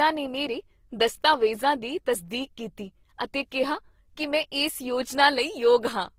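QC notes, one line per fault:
Throughout: transcoding between lossy codecs, likely. The speech carries two layers of compression artefacts heard together. That fits a Vorbis encode around 47 kbit/s re-encoded to Opus around 24 kbit/s. The second codec wastes bits on the first one's artefacts and adds its own. Nothing is left above 20.1 kHz, so the chain's lowest cut-off sits high.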